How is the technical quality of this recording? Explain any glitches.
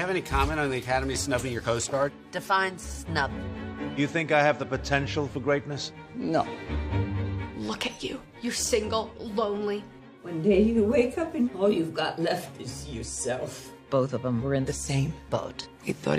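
No glitches or technical faults can be heard anywhere in the recording; the signal stays intact and stable throughout.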